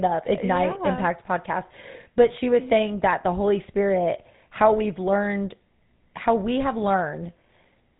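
From start to finish the speech carries the GSM full-rate codec's signature. Nothing reaches past about 3.8 kHz, and the excitation is rebuilt from sparse, regularly spaced pulses. That leaves a buzzy, gravelly roughness, unlike the watery, swirling artefacts of a starved transform codec, and consistent with a 13 kbps GSM link.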